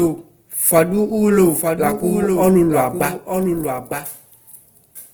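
From the first moment, the speech is heard twice: a second full-band copy trails the original by about a second and sits roughly 5 dB lower. This doubled audio track is likely a second capture through a slower path, or an edit that left two copies out of step. It differs from a room echo or reverb tail because the copy carries no decay and no room colour. It repeats the sound cleanly, just later and quieter.

Throughout the clip there is also plainly audible Opus compression in its music-oriented CELT mode. The bandwidth stays full, with content reaching about 20 kHz, but the encoder is short of bits, which fits a low rate around 16 kbps. Bands are filled by folding or noise, so the speech turns grainy, rough and hissy. This sets it apart from MP3 damage: there are few spectral holes and little swirling or warbling, only a coarse, noisy texture over the tones.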